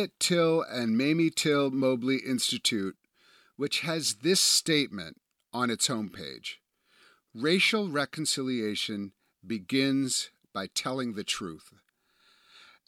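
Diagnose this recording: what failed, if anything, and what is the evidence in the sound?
Nothing failed: the sound of this recording gives no evidence of a fault at any stage.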